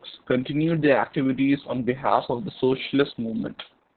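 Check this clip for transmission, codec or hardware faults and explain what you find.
The whole clip shows one codec fault, Opus voice compression. From start to finish the speech has nothing above 4.4 kHz, a narrowband SILK result that points to roughly 6 kbps. The excitation is coded coarsely, so the speech sounds hoarse and slightly robotic. A simple low-pass filter would only muffle it.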